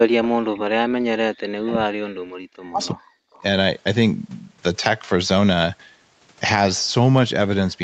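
From 0.0 to 0.5 s, and again from 1.09 to 3.18 s, an echo canceller that likely could not separate this talker from loudspeaker echo while both sides spoke at once turns everything down. This is speech suppressed in double talk: the voice sinks by as much as roughly 40 dB, fading almost to nothing or breaking into fragments across about two seconds in the longer stretch.

In the middle of that second stretch, at 1.66 to 1.73 s, a microphone on a loudspeaker call likely picked up the far end, and its canceller let part of it back through. This echo leak is a brief scrap of the voice repeated 326 ms late, about 20 dB below the direct speech. A second, fainter scrap follows at 3.33 to 3.42 s with the same 326 ms delay, roughly 30 dB down, heard within the call's 8 kHz band.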